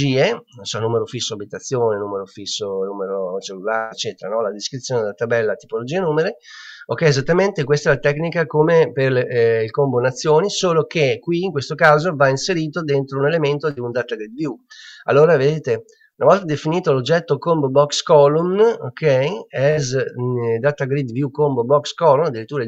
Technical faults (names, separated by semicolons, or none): burst of packet loss